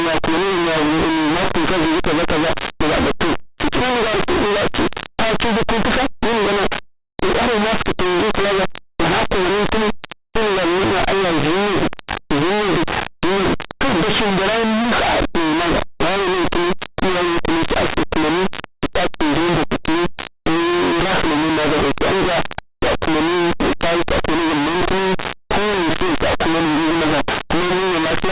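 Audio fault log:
throughout, linear audio read as companded: the speech's linear 8-bit samples are expanded as mu-law codes, so values just to one side of zero become the largest outputs. This gives very loud, harsh distortion. The waveform looks like a solid block, and the spectrogram shows dense broadband smear.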